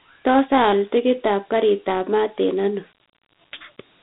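Speech carrying Dialogic VOX ADPCM throughout: nothing above 3.9 kHz, a 150 Hz to 3.7 kHz line band, and gritty hiss riding on the speech that fits 4-bit coding at 32 kbps, unlike clean telephone band-limiting.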